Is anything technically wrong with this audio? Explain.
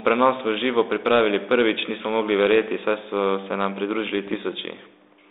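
Yes. From about 4.27 to 4.36 s the speech breaks into a short cluster of pops and a rough, gritty burst, with the level jumping briefly. These are bit errors on an ADPCM link. Because the 32 kbit/s G.726 stream carries only differences from a running prediction, a few flipped bits, around a third of a percent, knock the decoder's step size and predictor off track, and the damage rings on for milliseconds. The narrow 300 Hz to 3.7 kHz telephone band remains audible throughout the burst.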